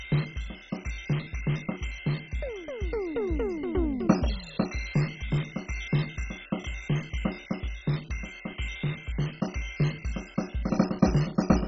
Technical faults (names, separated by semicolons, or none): MP2 compression